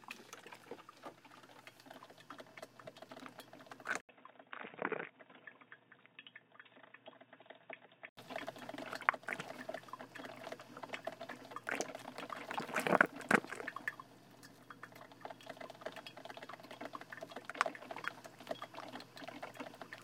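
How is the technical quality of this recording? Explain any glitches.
One glitch stands out. From 4.01 to 8.17 s, the input likely switched to a poorer device. After an 80 ms gap, the sound turns dull above 3.8 kHz, drops about 10 dB, and gains faint new noise.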